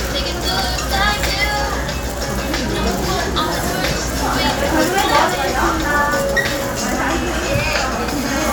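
Nothing technical goes wrong anywhere in this recording of sounds, so there's nothing here to flag.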